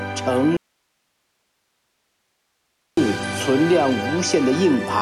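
Audio dropout to a faint residue, 0.57 to 2.97 s: an abrupt cut to hiss roughly 50 dB down, likely from a lost input while the downstream path stayed live.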